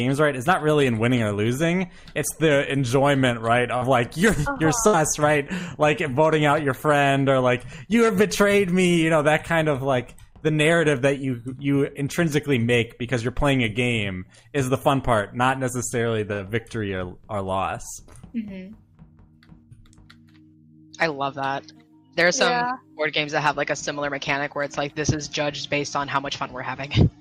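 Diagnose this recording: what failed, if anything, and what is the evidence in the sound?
Short concealed packet loss at 3.77 to 3.83 s, a network fault. About 40 ms of audio failed to reach the decoder in time, and the receiver filled roughly 39 ms of that hole by extending the sound that came just before it, then crossfaded back into the real signal. What you hear is a brief smear or wobble, and the short stretch of sound that should have been there is simply absent.

Burst of packet loss at 4.87 to 4.95 s and again at 16.33 to 16.41 s, also a network fault. In each case about 60 ms went missing in one run, long enough that concealment synthesised around 58 to 59 ms by carrying the preceding sound forward while fading it down. Each event sounds like a held buzz or dying hiss, after which the audio resumes slightly further on with the intervening material gone.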